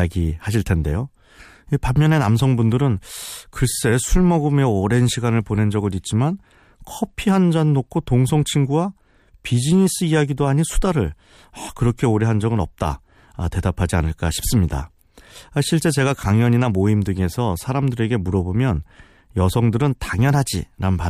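No technical faults can be heard at any point in this speech recording.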